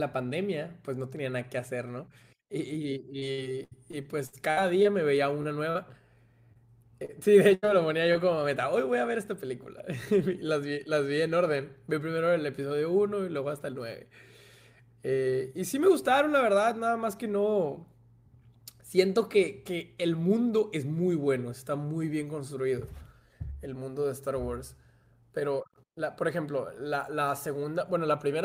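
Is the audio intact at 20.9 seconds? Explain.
Yes, the audio is intact at 20.9 seconds, with no fault audible at that moment.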